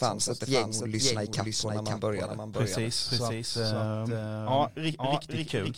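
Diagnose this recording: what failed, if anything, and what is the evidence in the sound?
Doubled audio track, throughout the speech: every syllable returns as a clean second copy roughly half a second later, a few dB quieter than the original. The repeat is full-band, with no decay or room colour, so it is not an acoustic echo. The likely cause is at the capture or editing stage: the same signal reaches the mix twice, once directly and once through a slower path or a misaligned duplicate track, holding a fixed offset.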